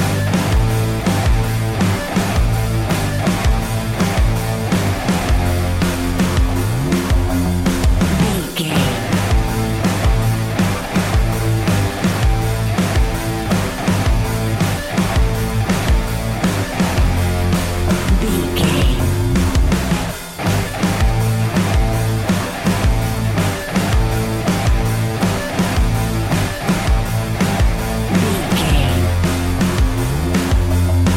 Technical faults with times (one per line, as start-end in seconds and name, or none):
none